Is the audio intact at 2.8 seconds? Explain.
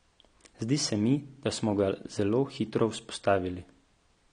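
No, at 2.8 seconds the speech carries AAC compression damage, and it runs through the whole clip rather than just that moment. Nothing comes through above about 9.7 kHz, so the top end sounds dull, and there's a smeared, warbly texture on sustained sounds and sibilants. That's likely a low-bitrate AAC-LC encode, something like 32 kbps, where the encoder pulls the cut-off down and thins out the spectrum to save bits.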